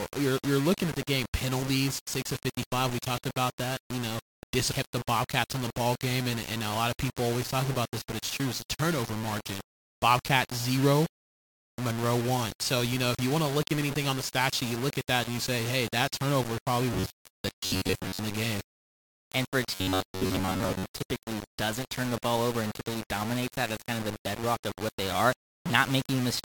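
From start to end, the speech sounds grainy and gritty. The distortion moves with the voice and sits only about 10 dB below it. Quiet passages break up. This is likely low bit depth without dither, consistent with rounding to about 5 bits.

From 16.93 to 18.19 s, after "hey that turnover probably" and before "in the game", the voice turns to a rigid metallic buzz at 93.8 Hz. It happens again from 19.72 to 20.94 s, between "for a" and "doesn't turn the ball". This is robotic sound from repeated short buffers. A roughly 10.7 ms chunk likely gets repeated, replacing most of the real audio.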